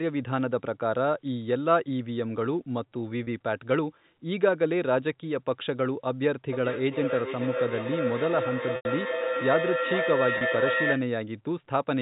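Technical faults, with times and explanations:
3.24 s, 8.76 s and 10.38 s, packet loss with pitch repetition: a bit of audio drops out each time and the receiver covers it by looping the last pitch period. At 3.24 and 10.38 the gap is only 30 ms, so you just hear a brief buzzy hold. At 8.76 it's 90 ms, which fits about three lost packets. That's too long to hold, so the loop fades toward silence before the speech cross-fades back in.
6.52–11.13 s, feedback howl: a second device in the same room is likely on the call, so the mic-to-speaker loop gains level on every pass and narrows to a tone of roughly 500 Hz. It peaks at about 1 dB under the speech and pulses roughly every 0.4 s, which is the loop's round-trip delay. It keeps going until the loop is broken at 11.13. The G.711 telephone coding underneath just gives the usual narrowband phone sound.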